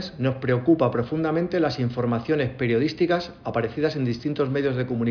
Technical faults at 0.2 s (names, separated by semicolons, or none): none